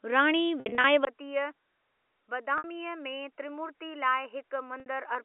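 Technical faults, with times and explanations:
0.60–0.84 s, 2.58–2.64 s and 4.80–4.86 s: packet loss with pitch repetition. The first stretch loses about 150 ms in pieces over 240 ms, with a longest gap of 60 ms. The later two are single 60 ms holes. The receiver repeats the last pitch period, so each gap sounds like a brief held buzz instead of a dropout.
1.05 s to the end: likely an input switched to a poorer device. After a 20 ms silence the sound turns dull and boxy, with nothing above 3 kHz, narrower than the 3.5 kHz telephone line it's carried on. It also drops roughly 10 dB and gains a faint new noise floor.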